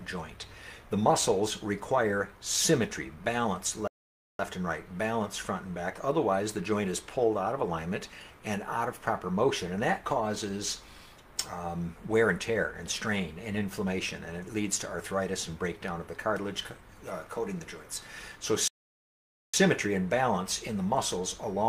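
At 3.88 s the sound cuts to silence for about 0.52 s, resuming at 4.39 s, and at 18.68 s it drops out again for about 0.86 s until 19.54 s. Both are playback stalls, likely the player starving for data or its thread blocking.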